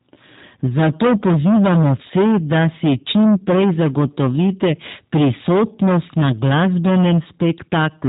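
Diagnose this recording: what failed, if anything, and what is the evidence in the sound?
Harsh, gritty fuzz rides on every loud syllable for the whole recording. This is hard clipping at a gain or converter stage. The signal is driven about 18 dB past full scale, so nearly a third of the waveform is sheared flat, spraying harmonics upward.

The speech also sounds thin, rough and plainly synthetic throughout, with nothing above 3.8 kHz. That points to the G.729 codec (the G.729A variant at 8 kbit/s). It rebuilds speech from a filter-and-pitch model with sparse pulses per frame, and that model leaves audible artefacts.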